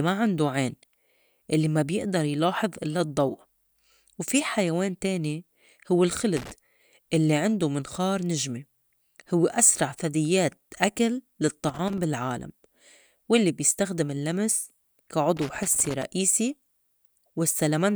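Irregular bursts of scratchy crackle break into the speech at 6.37 to 6.51 s, 11.69 to 11.98 s and 15.37 to 16.03 s. This is loose connector crackle: a worn or dirty contact making and breaking as it moves, chopping the signal into ragged fragments.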